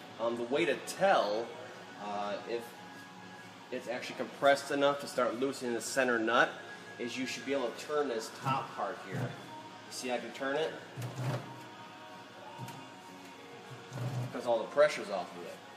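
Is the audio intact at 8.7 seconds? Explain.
Yes, the audio is intact at 8.7 seconds, with no dropout, click, distortion or other fault at that point.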